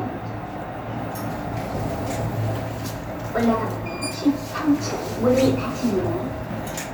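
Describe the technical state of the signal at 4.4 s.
At 4.4 s the audio is intact, with no dropout, clipping, glitch or other fault at that moment.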